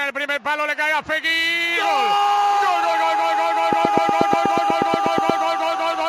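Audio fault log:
3.73–5.31 s, train of clicks: about fifteen sharp ticks of nearly identical shape, repeating at a steady 8.3 per second and standing roughly 15 dB above the surrounding sound, so they cut through rather than blend in. The even spacing and matching shape set this apart from random crackle or isolated pops, which come at irregular moments and vary in character. A repeating pulse like this is likely interference from nearby equipment or a faulty connection or power supply.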